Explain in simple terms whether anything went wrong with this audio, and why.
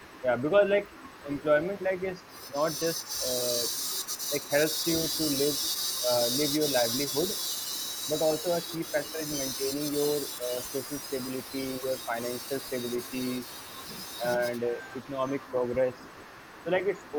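Several things went wrong in this speech clip.

The whole recording sounds grainy. Quiet parts turn rough, and the faintest sounds crackle or fall away to silence. The grit rises and falls with the speech itself. That points to low bit depth without dither. The audio was likely stored with very few steps of loudness, about what 8-bit audio gives, and simply cut down to those steps with no smoothing noise added.

Behind the speech, from start to finish, a faint second copy trails it. It lags about 0.42 seconds behind and sits well below the main voice. This is echo leak. The far end was likely playing the call through a loudspeaker. Its microphone picked that sound up again, and its echo canceller did not remove it all. So the voice came back, delayed and faint.

In three stretches the voice suddenly dips. The first is between 0.21 and 1.28 seconds, where it briefly sags a little. The second is between 3.21 and 12.54 seconds, where it drops more deeply, for about a second in total. 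The third is between 14.2 and 14.77 seconds, another short, mild dip. This is speech suppressed in double talk. Both sides were likely talking at once. The echo canceller confused the talker with the echo and turned the voice down.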